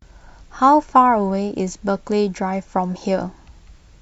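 Listening to the speech recording, nothing stood out as a technical problem at any point.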